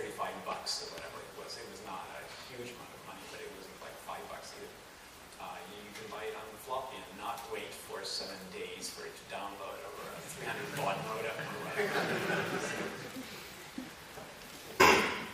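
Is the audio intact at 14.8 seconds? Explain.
No. At 14.79 s the sound jumps forward abruptly with a brief blip at the join, the mark of a stream segment skipped. The likely cause is one segment of the segmented stream failing to load, so the player carried on with the next and that stretch of programme never plays. This differs from a buffer underrun, where playback stalls into a gap and then resumes from the same point: here nothing pauses, and the material simply continues from later on.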